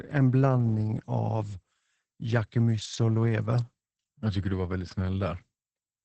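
From start to finish the speech carries Opus voice compression, heavily damaged. The band stops at about 8.8 kHz, a wideband SILK ceiling, and the linear-prediction coder has modelled the excitation so coarsely that the voice turns muffled, hoarse and faintly robotic, which points to a bitrate around 10 kbps. A simple low-pass filter would dull the top but leave the voice smooth. Here the rough, hoarse texture comes from the codec itself.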